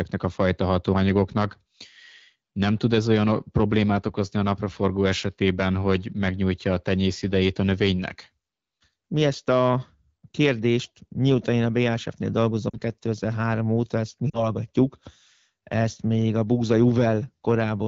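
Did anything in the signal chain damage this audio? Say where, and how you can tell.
Yes, on the radio link: lost AMR speech frames at 12.69–12.76 s and again at 14.30–14.45 s, right after "óta ezt mi". Each is a brief drop to near silence, about 40 ms of concealment, where the decoder stretches the last good pitch and vocal tract settings at falling gain.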